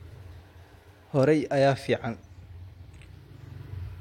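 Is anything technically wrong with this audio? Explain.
No, nothing here sounds technically wrong to me; it's a short bit of speech and I can't hear anything amiss anywhere in it.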